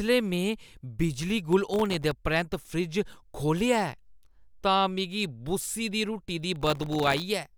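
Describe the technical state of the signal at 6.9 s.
At 6.9 s the speech is inside a burst of processor overload crackle running from 6.56 to 7.22 s. The processor is failing to finish its audio buffers in time, and dozens of very short blocks, each under a millisecond, come through as silence. Each dropout starts and ends with a hard edge, so the speech carries a dense, gritty tearing that stops once the load eases.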